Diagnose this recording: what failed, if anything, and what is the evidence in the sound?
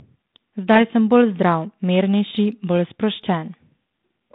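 Nothing in the recording has failed: the speech reaches us through a telephone path coded as G.726 ADPCM at 32 kbit/s, with a band from about 150 Hz to 3.7 kHz, and the light coding grain it carries is what that rate normally leaves rather than a breakdown at any stage.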